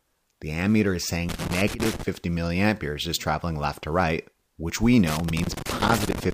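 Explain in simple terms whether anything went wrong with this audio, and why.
Something did go wrong. There's loose connector crackle from 1.29 to 2.03 s, and again from 5.08 s to the end. A worn or dirty plug contact keeps cutting in and out as it shifts, chopping the sound into irregular scratchy bursts.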